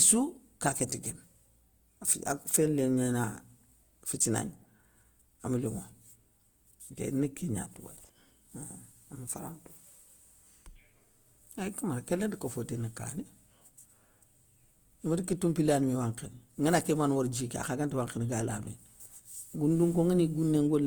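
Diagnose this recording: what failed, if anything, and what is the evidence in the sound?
Codec stage: the speech is grainy and rough throughout, with less MP3-style swirl because noise-filled bands leave few holes. Full bandwidth up to 20.1 kHz fits likely Opus compression in CELT mode, around 24 kbps.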